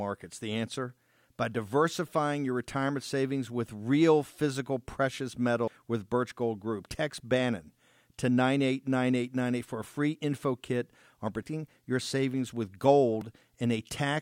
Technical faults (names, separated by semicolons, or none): audio missing between chunks; repeated buffer